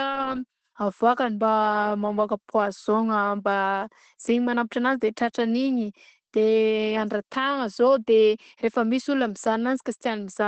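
From start to finish the speech sounds muffled and hoarse, with a slightly robotic edge and nothing above about 8.6 kHz. This is Opus voice compression running in its SILK linear-prediction mode at wideband, where the band is capped near 8 kHz and the excitation is coded coarsely. The plainly audible damage points to a low bitrate of around 12 kbps, too few bits to rebuild the voice's natural texture.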